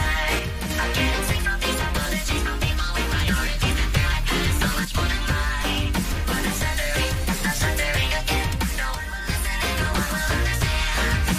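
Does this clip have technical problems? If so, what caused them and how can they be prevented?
Yes. Three short level dips occur, from 0.39 to 0.70 s, 4.85 to 4.95 s, and 8.95 to 9.29 s, each an abrupt drop of about 6 dB followed by a return to full level. The likely cause is one channel dropping out: when one side of a stereo feed goes silent and the signal is summed to mono, content shared by both channels halves in level, and anything present only on the lost side vanishes. Secure stereo cabling and connectors, and monitor both channels during capture.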